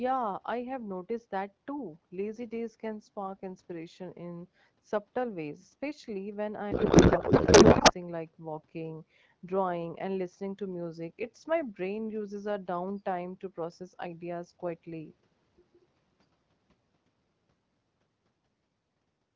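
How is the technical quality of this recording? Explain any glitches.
There is one clear glitch, a codec payload misread. From 6.71 to 7.94 s the speech turns into garbled noise and warble that barely tracks it. The decoder is reading AMR frames with their bits packed differently than sent. This fits octet-aligned frames being read as bandwidth-efficient, which scrambles every field.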